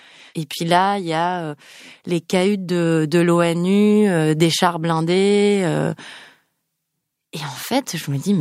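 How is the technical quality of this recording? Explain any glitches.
Not great, because one glitch runs almost the whole length. You get clock slip clicks from 0.11 s to 8.41 s, coming around every 20 ms, so they merge into a soft rattle under the speech. That's likely two devices on unsynced clocks, roughly 0.1 percent apart, dropping or repeating a sample each time.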